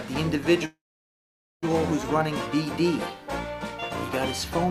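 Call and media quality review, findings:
Call audio freeze, 0.65–1.65 s. Packet delivery likely stalled upstream; jitter buffer drained. Receiver extended last sound as brief decaying fill, then 0.86 s silence. Playback resumes where it stopped: nothing lost, delay now 0.97 s longer.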